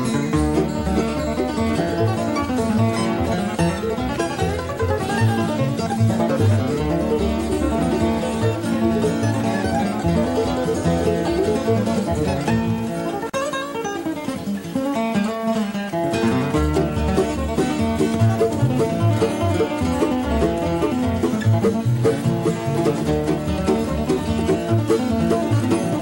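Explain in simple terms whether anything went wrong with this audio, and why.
At 13.30 s, the sound stops for 40 ms. It is a gap at a join of encoded pieces, left by untrimmed encoder silence.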